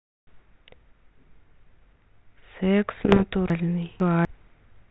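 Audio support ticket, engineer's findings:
Bit errors on an ADPCM link, 3.00–3.24 s: pops and rough bursts, brief level jumps. Error rate around 1%, flipped bits derail the decoder's step size and predictor, so each ringing tail lasts milliseconds. Waveform: spiky envelope jumps; spectrogram: broadband vertical streaks.

Chunks out of order, 3.50–4.25 s: jumbled moment. A 250 ms chunk plays two chunks late, so nothing is lost but three hard seams appear. Spectrogram: abrupt vertical discontinuities, formant tracks jumping position; waveform: step edges at each seam.

Underlying telephone band, nothing above 4 kHz, fits a 32 kbit/s G.726 path with light codec texture.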